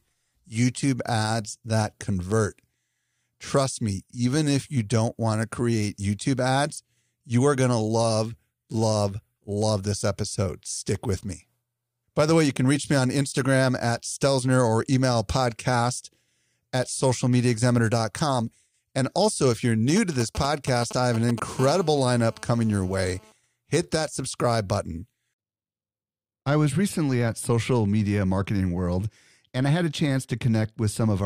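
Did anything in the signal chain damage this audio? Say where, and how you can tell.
Yes. GSM signalling bursts hit the analogue wiring from 19.97 to 21.40 s. Galloping ticks and short 217 Hz buzzes, roughly 10 dB under the speech, show rectified radio pulses.

GSM phone buzz follows, also analogue, from 21.59 to 23.32 s. A steady, raspy 217 Hz buzz about 21 dB below the speech points to a nearby phone in a call.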